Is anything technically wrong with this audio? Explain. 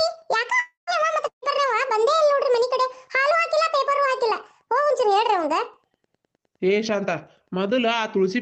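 Yes, there are two gaps where audio went missing, both riding on a call-codec path whose top end stops around 8 kHz, consistent with a low-bitrate Opus setting.

From 0.59 to 0.90 s the last sound is stretched into a fading buzz or hiss and then drops to near silence before playback picks up further along. That's likely a long network dropout: about 280 ms of audio never arrived, and the receiver papered over it.

From 1.27 to 1.45 s there's a shorter version: a burst of packet loss. The receiver holds and fades the preceding sound for roughly 150 ms, then audio resumes having skipped about 160 ms, so there's a small jump in continuity.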